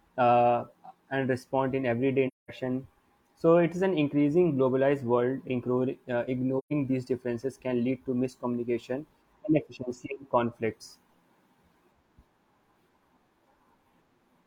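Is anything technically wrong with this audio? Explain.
Yes. AAC frame loss with muting occurs at 2.27 to 2.51 s and 6.58 to 6.73 s. The decoder zeroed the spectrum of the missing frames, and the overlapping windows fade the speech out and back in. This leaves soft-edged holes of about 0.21 s and 0.13 s, which fits five and then three lost frames.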